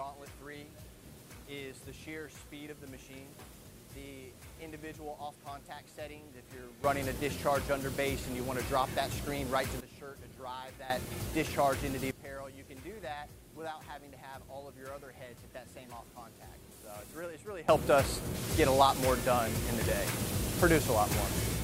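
At 6.84 s, 10.9 s and 17.69 s, sound and background noise jump together by about 14, 14 and 19 dB: a sudden gain jump, likely an unramped gain change.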